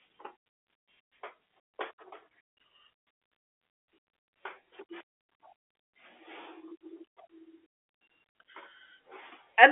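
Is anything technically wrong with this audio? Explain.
No, nothing stood out on listening to this speech clip.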